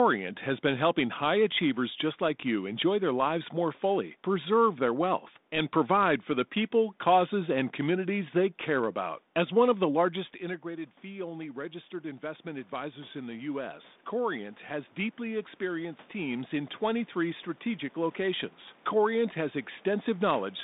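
Automatic gain rising runs from 10.61 to 18.57 s in this speech clip, just after "one of the largest". Around 10 s the talker moves back and the level at the microphone drops by about 14 dB. The gain control then raises its gain slowly, by about 11 dB over roughly eight seconds, so the voice and the room noise swell together. The 200 Hz to 3.7 kHz telephone band and light coding texture fit 32 kbit/s G.726 ADPCM.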